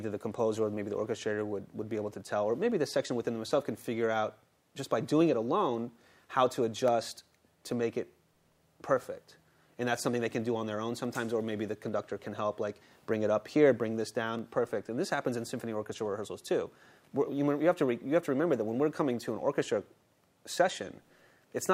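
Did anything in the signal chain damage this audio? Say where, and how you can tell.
Yes. A regular click repeats every 0.83 s from 0.21 s to 21.06 s, about thirty in all. This pattern points to clock drift buffer slips, likely at the driver or buffer stage. Two clocks disagree by around 200 ppm, so a handful of samples is dropped or repeated at each slip.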